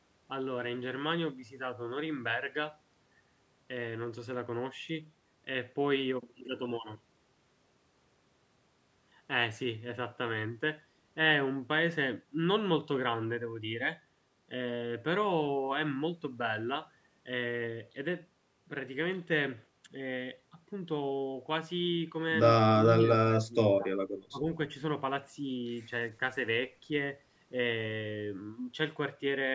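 Speech suppressed in double talk at 22.84–23.07 s, 23.25–23.86 s and 24.30–24.45 s: the voice dips slightly, then sinks by roughly 30 dB, then drops again. This is likely an echo canceller mistaking the talker for loudspeaker echo while both sides spoke.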